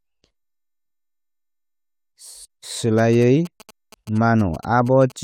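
From 2.98 s to 5.12 s, GSM signalling bursts break into the speech: a galloping dit-dit-dit of short buzzes pitched at about 217 Hz, well below the speech level. A nearby 2G phone is sending brief groups of radio bursts, and the audio circuitry rectifies them into sound. Unlike steady mains hum at 50 or 60 Hz, this buzz is gated into irregular clusters that start and stop rather than droning continuously.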